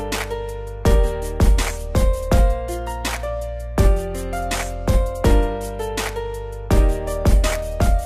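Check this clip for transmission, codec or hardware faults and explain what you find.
Nothing in the transmission path, codec or hardware stands out as a fault anywhere in the recording.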